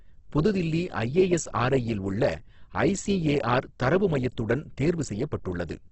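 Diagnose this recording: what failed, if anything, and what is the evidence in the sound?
Codec stage, throughout: heavy Opus compression. The speech turns grainy and rough, and nothing sits above 8.2 kHz. A spectrogram shows a flat ceiling there, with bands filled by noise rather than left empty. This fits a low rate near 12 kbps, likely in the CELT mode.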